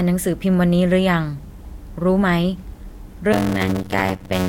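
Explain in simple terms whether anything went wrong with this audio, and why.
From 3.32 s to the end, the speech picks up a steady buzz of about 92 Hz and slows to roughly 0.53 times normal speed at about its usual pitch. This is a block size mismatch (padded): short blocks, consistent with 256 samples, are topped up with silence.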